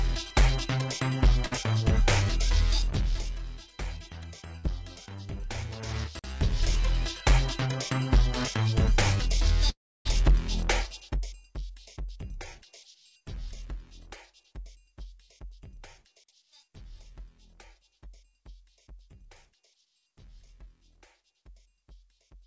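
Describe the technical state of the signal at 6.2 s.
A gap between chunks runs from 6.19 to 6.24 s: a 48 ms silence where one delivered chunk ends and the next begins, interrupting the sound.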